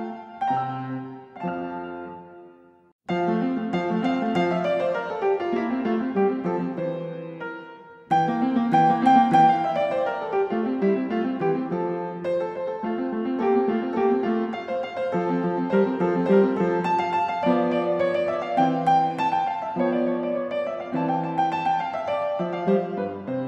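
No technical faults are audible.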